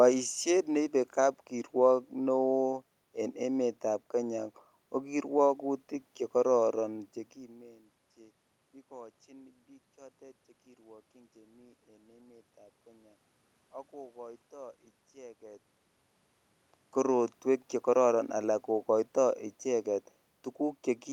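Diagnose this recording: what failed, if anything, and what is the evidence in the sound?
Nothing in the chain has failed here; the background noise is just the room, and the level shifts at around 7 s and again near 15.5 s are the talker moving relative to the microphone.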